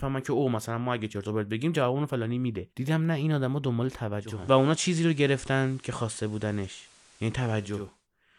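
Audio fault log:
4.12–8.08 s, digital radio blending to analogue: the receiver cross-fades over about half a second to the station's FM signal, adding hiss roughly 30 dB down.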